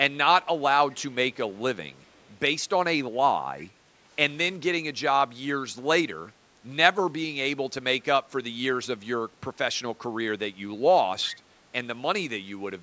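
A speech recording with a handful of short echo leak events: faint delayed copies of the speech at 0.91–0.98 s, 2.01–2.27 s, 3.6–3.66 s, 6.27–6.32 s and 11.23–11.31 s, each trailing the original by 388 ms and sitting very low, roughly 20 to 40 dB under the speech. The likely cause is a far end on loudspeaker whose echo canceller let brief scraps of its mic pickup slip back down the call.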